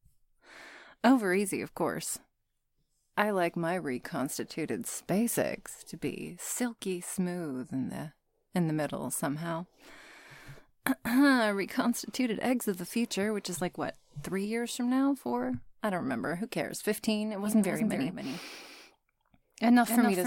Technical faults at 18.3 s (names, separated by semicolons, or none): doubled audio track